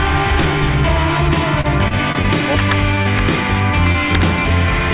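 The audio is band-limited, with nothing above 4 kHz, consistent with a G.711 mu-law call path. From 1.61 to 2.27 s, repeated packet loss gives choppy, robotic sound. Short gaps, the longest about 30 ms, are patched by repeating the previous sound, and about 60 ms is lost in total. Integer overflow produces violent cracks at 2.59–2.72 s, 3.19 s and 4.15–4.22 s, where peaks are driven about 4, 2 and 7 dB past full scale. Instead of flattening like clipping, those peaks wrap to the opposite sign, so the cracks are far harsher. Short stalls from late packets appear at 3.03–3.08 s and 3.92–3.97 s. The sound is held for about 20 and 23 ms with a slight buzz or dip and then resumes where it stopped, so unlike packet loss nothing is missing.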